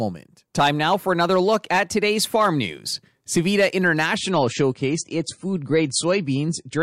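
At 4.16 s the adaptive stream switches to a lower bitrate, as a slowed connection forces a cheaper encoding, likely around a quarter of the earlier rate. From there to the end, the speech loses everything above 9.8 kHz and turns duller, with audible codec smearing and no gap.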